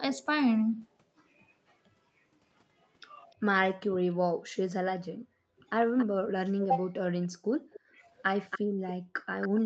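At 3.31 to 3.35 s a very faint delayed copy of the speech appears, then stronger ones at 5.98 to 6.06 s, 7.22 to 7.8 s and 8.5 to 8.59 s, lagging by about 280 to 300 ms. This is likely echo leak: a far-end loudspeaker's output reached its microphone and the echo canceller didn't fully remove it. From 7.4 to 7.96 s, and again at 8.65 to 8.86 s, the room background dips by up to about 40 dB and about 29 dB. This is background gated by the echo canceller, which suppressed the microphone while the loudspeaker played.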